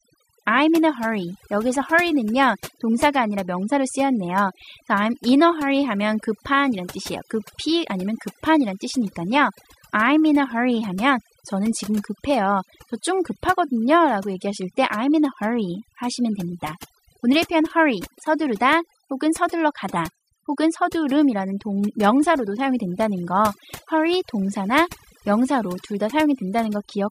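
From start to finish there's overdone noise removal: the denoiser was pushed too hard, gating bands near its noise estimate, so the background twinkles.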